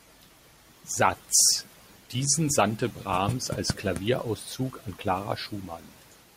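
No technical faults can be heard anywhere in the speech recording.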